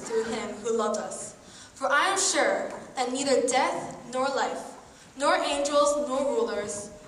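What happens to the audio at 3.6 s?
Nothing goes wrong at 3.6 s; the audio runs straight through that point with no dropout, glitch or other fault.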